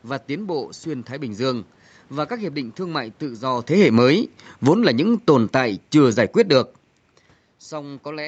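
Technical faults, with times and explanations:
3.66–6.61 s, automatic gain falling: the call's automatic gain control judged the input too loud, or its background noise too strong, and eased its gain down by about 8 dB over roughly three seconds. The speech and the room noise beneath it sink together, rather than the speech alone fading. On a waveform, the envelope tapers steadily across that span, noise floor included. On a spectrogram, every band up to the 8 kHz ceiling dims evenly, with no change in spectral shape.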